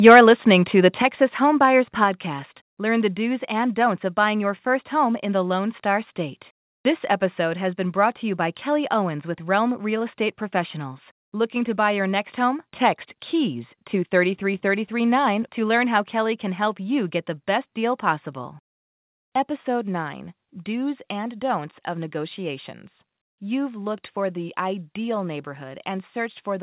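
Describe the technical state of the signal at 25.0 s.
At 25.0 s the speech signal is intact, carried cleanly through the call path with the narrowband G.711 mu-law character that leaves nothing above 4 kHz.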